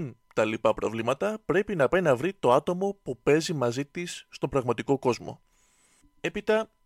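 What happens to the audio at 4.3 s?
Nothing goes wrong at 4.3 s: the speech there plays through intact, with no dropout, click or other fault.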